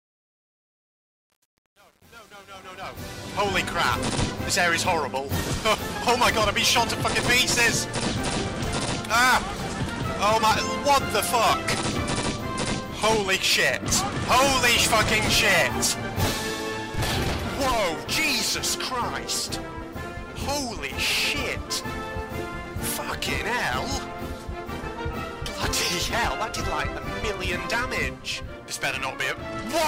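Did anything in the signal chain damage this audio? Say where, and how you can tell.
Yes. Truncation distortion on the fade-in from 0.00 to 3.56 s, worst before 3.24 s, is gritty, consistent with an undithered, roughly 8-bit gain stage.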